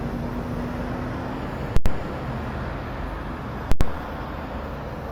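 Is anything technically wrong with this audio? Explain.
Yes. There are two faults, both invalid numbers at full scale. They fall from 1.77 to 1.86 s and from 3.72 to 3.81 s. Each lasts about 93 ms, which fits a 4096-sample processing block. A calculation went to infinite or invalid values. The output then pinned to one extreme value, far beyond the audio's peaks, for the whole block. You hear a very loud pop as each block starts and another as it ends. The sound is gone in between.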